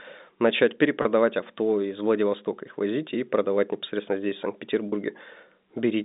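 Speech carried over a G.711 telephone line, band-limited to roughly 200 Hz to 3.7 kHz, suffers packet loss with pitch repetition at 1.02 to 1.05 s and 4.89 to 4.92 s. Each 30 ms gap, consistent with one lost packet, is filled by a repeated pitch period, so it sounds like a brief held buzz rather than the silent hole or click of a plain dropout.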